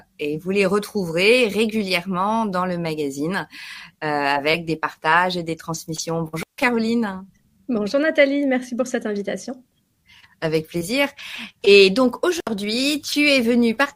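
The audio drops out twice from an intermittent contact, a loose plug or cable briefly opening: at 6.37 to 6.63 s (about 150 ms open) and 12.37 to 12.50 s (about 66 ms), crackling at each edge. The waveform shows near-flat gaps bracketed by spiky transients, which appear on a spectrogram as broadband vertical streaks.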